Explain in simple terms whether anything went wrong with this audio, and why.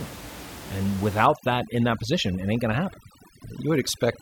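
From 1.26 s onward the speech sits over twinkling near-silence: overdone noise removal, stripping quiet speech along with the room noise.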